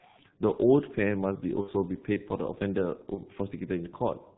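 Speech clip carried throughout by the G.723.1 codec, muffled and hoarse with smeared consonants, its spectrogram cut off sharply at 4 kHz, which fits the heavy damage of a roughly 6.3 kbit/s stream. VoIP packet loss concealed by the speech codec is heard at 1.61–1.71 s and 3.14–3.21 s. Each gap is filled with fading extrapolated sound whose waveform envelope dips. The first gap is about 60 ms, which points to two lost 30 ms frames, and the second is about 30 ms, pointing to one.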